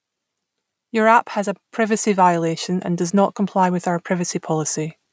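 From 1.34 s to 3.13 s, automatic gain rising occurs. The gain control judged the input too quiet and lifted it about 5 dB, swelling voice and background together.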